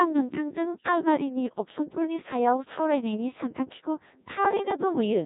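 Codec 2 vocoder damage runs throughout this speech. Only pitch, voicing, energy and a spectral envelope survive, and the decoder rebuilds everything from sine waves. The result is heavily robotic and buzzy, with nothing above 3.8 kHz, which fits a low-rate mode near 1.6 kbit/s.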